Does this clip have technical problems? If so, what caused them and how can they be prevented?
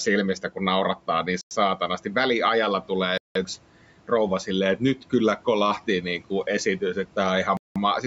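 Yes. Three hard silences at 1.41–1.51 s, 3.18–3.35 s and 7.57–7.76 s (about 100, 180 and 190 ms) are likely Bluetooth stalls. The headphone buffer ran dry while interference delayed packets, then the speech resumed where it stopped. Unlike a suppressor dropout, the speech falls to complete silence rather than fading. Keeping the phone close, with fewer 2.4 GHz devices nearby, prevents this.

Between 4.78 and 5.13 s, speech cut by the noise suppressor dips by up to about 9 dB for roughly a tenth of a second, so the soft sounds seem swallowed. The speech is turned down but never goes silent, which separates it from a stall. A gentler suppression setting, or a quieter room so the suppressor works less hard, prevents this.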